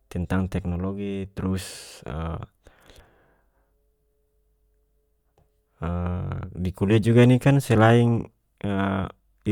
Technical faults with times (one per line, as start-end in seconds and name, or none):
none